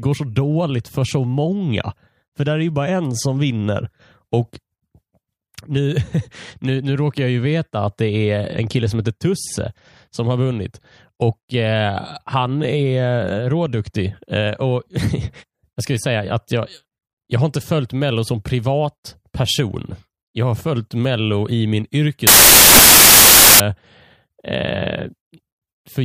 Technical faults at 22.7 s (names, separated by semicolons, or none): samples built from the wrong bytes